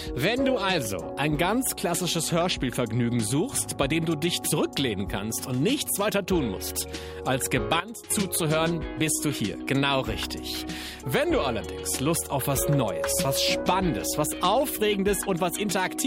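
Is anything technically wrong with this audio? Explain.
Yes. A sudden gain jump from 7.80 to 8.10 s drops the sound and background noise together by about 12 dB, likely from a gain change applied without a ramp.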